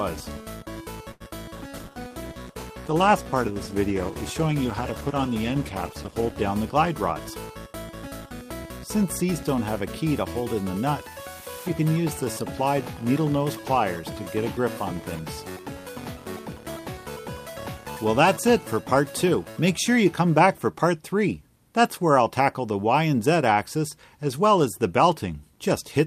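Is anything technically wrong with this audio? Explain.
Yes, there's a cluster of network-related faults early on, plus a speed-up a bit later.

At 1.11 to 1.22 s there's a short stall from a late packet. The jitter buffer ran dry, so the receiver held the last sound for about 90 ms until the packet turned up, then carried on from the same spot. You hear one sound dragged out, maybe with a faint buzz, but nothing's actually missing.

Right after, at 1.28 to 1.31 s and 1.31 to 1.33 s, there are two back-to-back short concealed packet losses, each dropping 20 ms. The receiver barely filled either gap, cutting the built-up delay by something like 15 to 20 ms each time, so it comes across as a quick smear or wobble.

From 1.56 to 6.51 s there's a call bitrate drop. The bandwidth estimate fell and the encoder went from 48 kbps down to 15 kbps, sitting at the bottom for about 4.8 s. The coarser coding makes the audio rougher and a bit watery, with the top end dulled.

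Inside that stretch, at 1.71 to 1.91 s, there's a jitter buffer slow-down. The buffer was rebuilding its reserve by repeating pitch periods and bits of pauses, adding 38 ms. Playback drops to about 85% speed at the same pitch, so the sound gets drawn out.

Then at 7.53 to 9.55 s there's a jitter buffer speed-up. The buffer was holding more than its target, so the receiver snipped out short pieces, roughly a tenth of a second in total. It plays at about 104% speed with the pitch unchanged.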